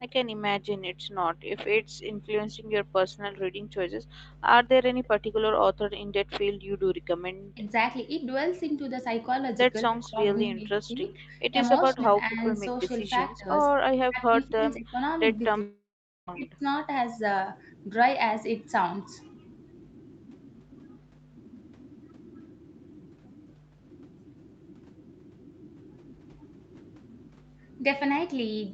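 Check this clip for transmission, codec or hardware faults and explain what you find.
Several faults are audible, all typical of a hands-free call. The audio stops above 8 kHz, which is normal for this call path.

Background gated by the echo canceller, at 0.95 to 1.09 s and 2.55 to 2.66 s. The canceller clamped the microphone while the loudspeaker played. Room sound drops by about 29 dB and 27 dB, then returns.

Echo leak, at 4.68 to 5.08 s. A faint copy of the speech arrives 234 ms late, about 30 dB below it. This is likely residual loudspeaker sound the canceller missed.

Speech suppressed in double talk, at 7.54 to 7.63 s, 9.86 to 11.36 s, 11.96 to 12.41 s, 13.37 to 13.48 s and 14.02 to 16.64 s. The voice dips by roughly 10 to 30 dB, deepest in the last stretch. The likely cause is the canceller ducking both talkers during overlap.

Long network dropout, at 15.61 to 16.29 s. A fading fill covers the gap, then nearly half a second of silence follows. 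That audio never returns, likely because packets stopped arriving.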